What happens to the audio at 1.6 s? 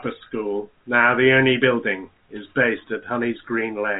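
At 1.6 s the speech carries on intact, with no dropout, glitch or distortion, only the usual narrow telephone bandwidth of G.711 coding with nothing above about 3.8 kHz.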